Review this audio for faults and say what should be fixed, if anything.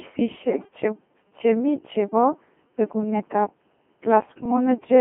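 The whole recording passes through the Codec 2 vocoder at 2.4 kbit/s, band-limited to roughly 150 Hz to 3.4 kHz, and the damage is heavy. Only pitch, voicing, energy and a coarse spectral envelope survive. The decoder rebuilds the speech from sine waves, which makes it robotic and buzzy. On a spectrogram, the harmonics look unnaturally regular and comb-like, with nothing below 150 Hz or above 3.4 kHz. The waveform looks synthetic rather than natural. Prevent this by using a higher-rate, waveform-preserving codec such as Opus at 16 kbit/s or more.

From 0.50 to 0.68 s there are bit errors on digital voice radio. Flipped bits corrupted the vocoder parameters, consistent with a handful of damaged frames at an error rate of several percent. For that stretch the synthetic speech jumps erratically in pitch, level and timbre and turns into warbling, bleeping gibberish. A spectrogram shows the harmonic stack lurching up and down in frame-sized steps. 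The waveform envelope shows abrupt level jumps. Prevent this with stronger forward error correction and a better link margin, so the receiver is not operating at the edge of coverage.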